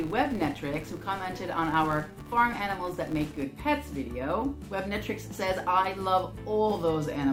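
From the start to about 3.46 s, the audio carries a filter restarted on every block. The filter's internal state is cleared at each block boundary, so every block begins as if from silence and produces a small start-up transient. These transients repeat at a fixed rate and merge into a buzz at about 188 Hz, which fits a 256-sample block, and the buzz rises and falls with the level of the sound.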